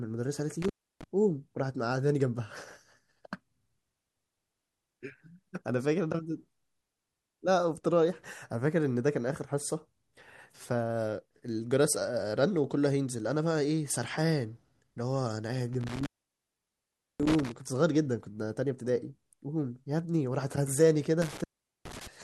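It's a speech recording with an intermittent contact, probably a loose cable or plug. The sound drops out with crackle at each edge and faint hiss in the gap, at 0.62–1.04 s, 15.73–17.52 s (the longest, about 1.1 s open) and 21.22–22.07 s.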